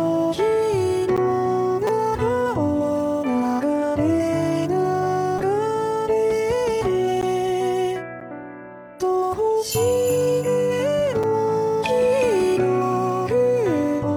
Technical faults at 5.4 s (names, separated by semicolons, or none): repeated buffer